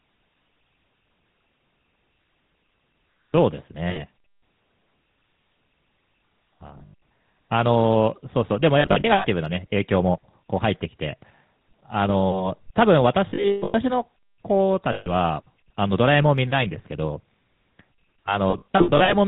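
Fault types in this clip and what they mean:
GSM full-rate codec: The speech was coded by modelling the vocal tract and exciting it with a sparse, regularly spaced pulse train, consistent with 13 kbps full-rate GSM, so nothing above 4 kHz survives and a plainly audible buzzy, gravelly roughness runs throughout.
lost GSM frames: Damaged frames were replaced by repeating the last good frame's settings, giving a brief rough, metallic ring at 3.9, 6.78, 8.8, 13.3, 14.92 and 18.5 s. The longest gap, near 13.3 s, lasts about 150 ms.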